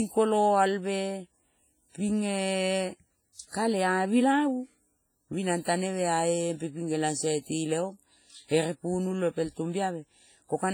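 Speech, with heavy transform-codec damage throughout, likely from WMA compression at a low rate. The smearing fits around 24 kbps. Long transform blocks spread quantisation noise over tens of milliseconds, so onsets ring and wash, hiss pumps with the speech, and weak spectral detail drops out.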